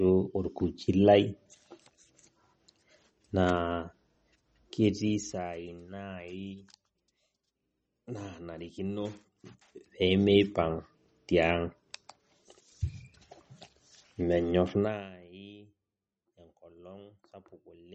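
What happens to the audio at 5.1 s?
Right around 5.1 s you're in the middle of some zipper noise, running from about 4.9 to 5.56 s. The level drops by roughly 15 dB, but instead of gliding down it moves in small jumps, around a hundred a second. That's consistent with a gain update once per short buffer of about 10 ms with no smoothing between steps. Each jump leaves a tiny click, so you hear a fast ticking or zipping riding on the speech while the fade happens.

Underneath that, the speech has a watery, swirly quality with smeared attacks, and nothing comes through above 8.3 kHz. That's likely MP3 compression at a low bitrate, around 35 kbps. With so few bits to spend, the encoder cuts the treble at a fixed point and drops weaker frequency components, which flicker in and out from frame to frame. The damage is plainly audible here.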